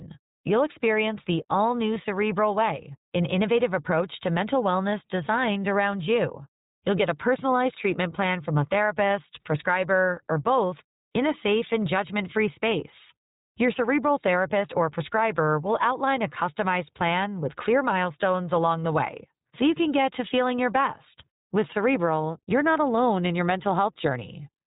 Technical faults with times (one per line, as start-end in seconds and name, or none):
0.00-24.67 iLBC codec